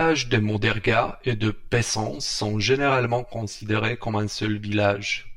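Speech carries channel delay (comb filtering) from start to end: one channel trails the other by around 10 ms, and when the two are summed to mono the shared sound cancels at regularly spaced frequencies. With the first notch down near 50 Hz and further notches stacked evenly above it, the voice takes on a hollow, phasey quality. A spectrogram would show fixed horizontal dark stripes across the whole clip, unchanged as the speech moves.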